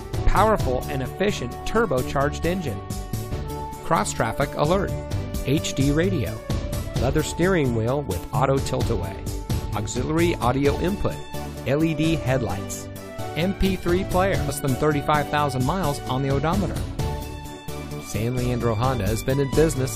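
Corrupted compressed data made the decoder misread frames and lose sync, producing brief glitches at 3.31 s and 14.48 s.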